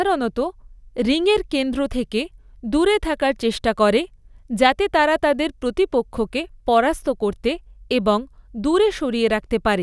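No technical faults can be heard anywhere in the speech.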